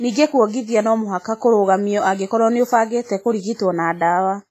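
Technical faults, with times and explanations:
Throughout, WMA compression: the speech rings and sounds washy, with hiss that breathes with the signal rather than sitting steady, and nothing above 15.4 kHz. Long transform blocks at a low bitrate, fitting 24 kbps, likely smear quantisation noise across tens of milliseconds.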